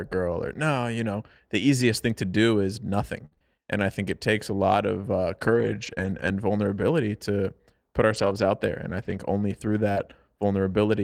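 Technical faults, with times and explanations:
3.25 to 10.02 s, scattered short gaps: Just after "to do is nothing", the speech develops about five brief holes where packets were lost or arrived late. The longest is around 70 ms. About 160 ms of audio is missing in total. The receiver covers each hole by stretching the last sound forward, so there are small ticks, smears and hiccups rather than silences. Only about 2% of this stretch is patched.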